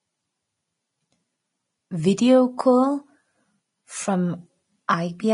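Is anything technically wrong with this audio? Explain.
Yes. The speech carries plainly audible codec damage throughout, and one attack near the end is smeared.

Throughout the clip nothing is present above 10.5 kHz, and the upper treble turns hissy and grainy, with roughened tones and softened consonant onsets. This is likely Vorbis compression at a low rate, which fits roughly 30 kbps: the encoder drops the top band and quantises the remaining high-frequency detail so coarsely that it becomes noise.

At 4.88 s there is a pre-echo lasting about 10 ms. The codec's quantisation noise is spread evenly across a transform block, so noise sized for a sharp attack also fills the quiet moment just before it, producing a brief hiss ahead of the onset and blurring its edge.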